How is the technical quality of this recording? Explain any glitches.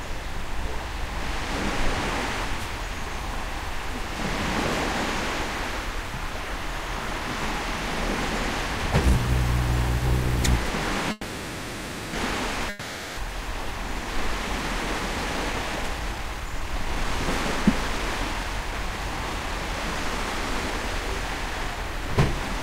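The recording has three clear transmission faults in the second half, all typical of audio carried over a packet network.

From 11.11 to 12.16 s there is a call audio freeze. The last moment of sound is stretched into a buzzy, fading tail that fills about 1.02 s, and then the audio resumes exactly where it left off. Nothing is lost, but everything after this point now runs about 1.02 s late. The likely cause is packets held up in transit, which let the jitter buffer run dry until they arrived.

From 12.69 to 13.20 s there is a long network dropout. The sound again decays into a synthetic, fading continuation lasting about 0.48 s. This time the audio returns further along, so the same 0.48 s of real material is missing rather than delayed. The likely cause is a stretch of packets that never arrived in time to be played.

From 15.27 to 22.06 s the jitter buffer speed-up is at work. A backlog of buffered audio is drained by repeatedly cutting out tiny pitch-period-length slices. 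Playback runs at 115% speed with unchanged pitch, so the sound feels hurried and its timing compressed. In total roughly a second of audio is trimmed away across this span.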